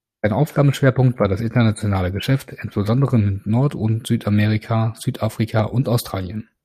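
No technical faults are audible.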